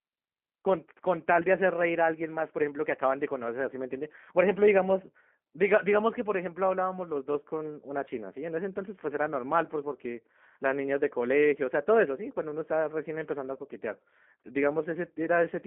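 Speech carries G.729 codec damage throughout, clearly audible: a rough, slightly synthetic texture from pulse-based rebuilding, confined to roughly 200 Hz to 3.4 kHz with nothing above 3.5 kHz. That fits an 8 kbit/s G.729A line, and the rough, rebuilt texture distinguishes it from a simple telephone band filter.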